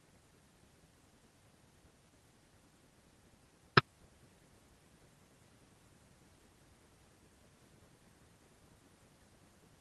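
No technical faults can be heard anywhere in this speech. The WebRTC call path works as intended, with the top end rolling off around 12 kHz, which fits a superwideband Opus setting.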